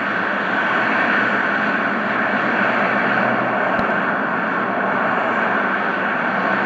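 A loud pop, heard as two sharp hits in quick succession between 3.79 and 3.93 s, stands clear of the surrounding sound, peaking roughly 10 dB above it. The double pulse most likely comes from a brief voltage step entering the chain, such as a plug, a switch, static discharge or a driver glitch, which the downstream circuitry then shapes into a thump. The underlying sound continues unbroken beneath both pops.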